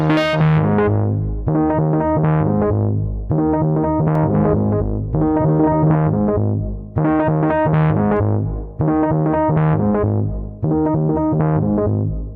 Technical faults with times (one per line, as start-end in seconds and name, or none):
4.15-5.95 doubled audio track